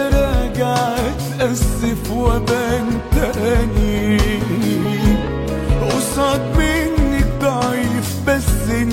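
No technical faults are audible.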